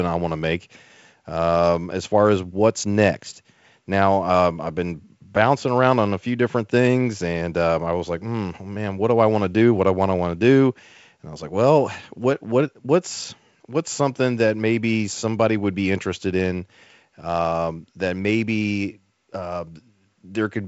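No faults are present in this speech: the G.722 wideband path tops out near 7.7 kHz, with the faint upper-band hiss and slightly rougher lower band that fit a 56 kbit/s mode.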